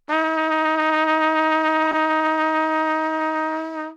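At 1.86 s a corrupt frame decoded interrupts the everyday sounds for about 90 ms, to 1.95 s. Damaged bits in a short run of compressed frames, perhaps five, were played rather than discarded, so misread gains and codes threw energy into the wrong frequencies. It is heard as a chirp, squeak, blip or burst of noise, with the error peaking near about -10 dBFS. Unlike a concealed frame, foreign content appears instead.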